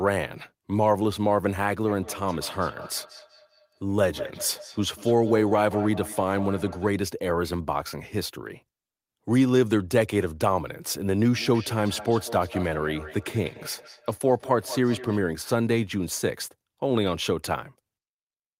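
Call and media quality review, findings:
Feedback echo between two devices, 1.88–6.95 s and 11.33–15.23 s. Speech returns at roughly 200 ms intervals, loudest copy about 14 dB below direct speech. Probable cause: a second device's mic re-captures the other device's playback, which neither echo canceller removes. Spectrogram shows evenly spaced ghost copies of each syllable; waveform shows trailing bursts.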